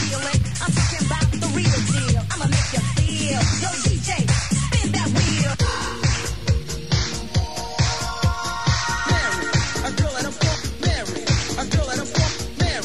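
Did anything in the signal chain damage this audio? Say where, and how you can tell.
No, nothing in the signal chain audibly damaged this audio. Across the whole clip there is no point where any stage can be heard leaving a mark on the sound.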